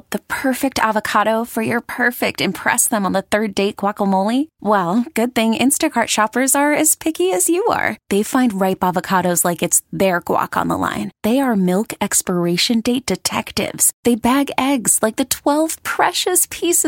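No technical faults are audible.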